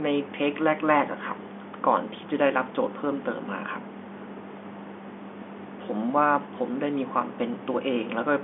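No technical faults are present: the speech carries the narrow band of an ordinary fixed-line telephone call, roughly 200 Hz to 3.5 kHz with nothing above about 3.7 kHz, which fits standard G.711 A-law coding at 64 kbps, and any coding damage is faint at most.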